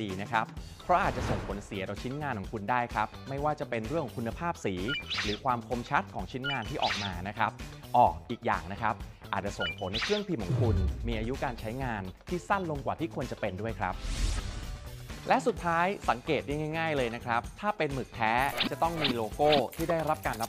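No technical faults can be heard anywhere in this recording.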